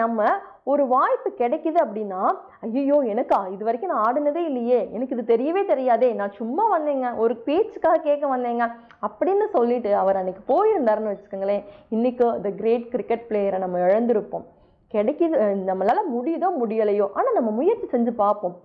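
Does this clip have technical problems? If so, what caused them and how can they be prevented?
No, there are no technical problems to point to anywhere in the clip. With nothing going wrong, there is no cause to trace and nothing that needs preventing.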